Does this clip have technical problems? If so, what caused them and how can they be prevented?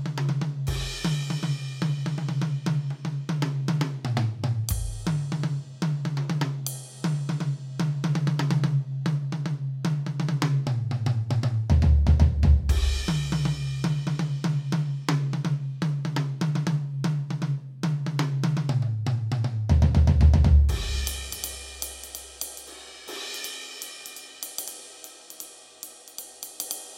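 No, this clip has no technical problems, so there is nothing to cause them or to prevent.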